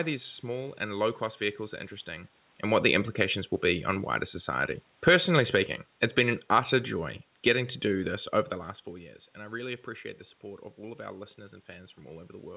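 From 2.66 s to 8.2 s the speech and its room background sink together, losing about 5 dB as the level eases down. This is automatic gain falling: the gain control judged the input too loud or its background noise too strong and gradually lowered its gain.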